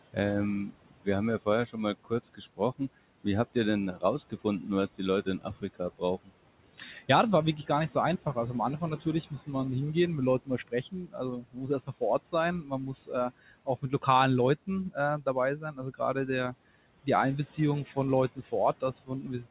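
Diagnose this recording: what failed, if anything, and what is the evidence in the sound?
The call processing's noise suppressor is at fault. Throughout the clip it pulls the steady background down by about 18 dB, frame by frame, so the room noise, itself about 18 dB below the speech, dips in the gaps and swells back under each phrase. The voice is also band-limited at 4 kHz, which fits a narrowband G.711 call path.

The same suppressor also misclassifies parts of the speech as noise and attenuates them along with the background, which is speech cut by the noise suppressor. Soft consonants and word endings sound swallowed. This happens across 0.13–6.32 s, for roughly a second in total, by up to about 19 dB. It recurs at 8.26–9.49 s, between "wirklich gar nicht so" and "hingehen mit", briefly and by about 13 dB. Further cuts come at 10.45–14.04 s, again about a second in total at up to about 19 dB, and from 14.67 s to the end at up to about 18 dB.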